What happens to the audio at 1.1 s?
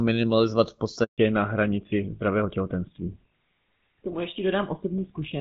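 At 1.1 s the call is in a handover gap: as the phone switched networks, no speech frames arrived between 1.04 and 1.18 s. The sound fades out within a few tens of milliseconds and stays silent for 140 ms, and whatever was said in that span is lost.

From 1.18 s to the end of the clip, the call is in fallback to narrowband. The new link dropped from the HD Voice codec, whose clarity fits AMR-WB at about 12.65 kbit/s, to an older narrowband codec consistent with GSM full rate. Nothing above 4 kHz survives, so the speech turns duller and rougher.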